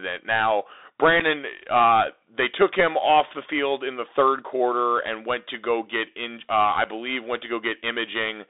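From the start the whole clip has the sound of a Bluetooth CVSD headset codec. The band sits at roughly 300 Hz to 3.7 kHz, which fits a 64 kbps CVSD link. The one-bit delta coding can't keep up with loud, fast-moving high sounds, so s sounds turn scratchy over a grainy hiss.

At 1.2 s, just before "uh they took him", there's unconcealed Bluetooth headset packet loss: about 7.5 ms of speech simply vanishes, roughly one packet's worth, and nothing fills the gap. It's heard as a tiny hole with abrupt edges. The same thing happens again at 6.84 s, right before "believe went to".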